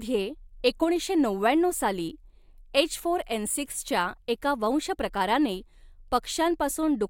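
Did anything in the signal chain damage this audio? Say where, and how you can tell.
No, nothing in the signal chain has left an audible mark on this speech recording. Listening through it, there is no point where any stage between capture and playback can be heard altering the signal.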